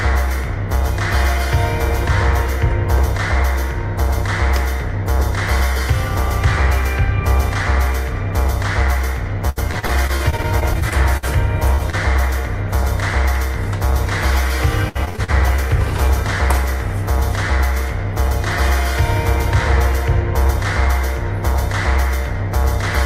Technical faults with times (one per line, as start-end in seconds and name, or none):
9.49-11.27 repeated packet loss (robotic sound)
11.75-11.95 short concealed packet loss
14.89-15.60 repeated packet loss (robotic sound)